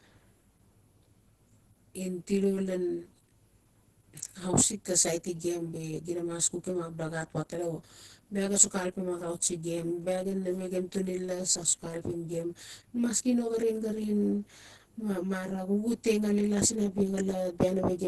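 Throughout the speech, channel delay (comb filtering) from one side lagging roughly 20 ms then summed gives dense notches from about 30 Hz up, a rough, slightly doubled sound rather than decaying reverb. Also throughout, grainy, hoarse, muffled texture with nothing above 12.1 kHz, not MP3-style swirl, is likely Opus compression at a rate that suggests roughly 12 kbps.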